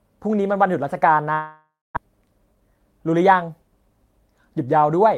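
At 1.33 s the speech breaks off for about 0.65 s, until 1.99 s. What follows the break is a buzzy continuation of the last sound that fades, then about 230 ms of silence. When the speech returns, roughly 400 ms of it is simply gone. That pattern points to a long network dropout, likely caused by the network delivering nothing for that stretch. A brief packet-loss glitch would be patched in a few tens of milliseconds, but here the concealment gives out, and the resumed audio skips ahead instead of picking up where it stopped.

From 2.07 s to 4.59 s the speech runs about 8% fast while its pitch stays put. This is a jitter buffer speed-up: after the gap, audio delayed by about a fifth of a second had piled up. The receiver trimmed that excess by repeatedly cutting out pitch-period-sized slivers, removing around 200 ms in total. A resampling speed change would raise the pitch along with the tempo. 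Here only the timing tightens, so the speech sounds hurried but not chipmunk-like.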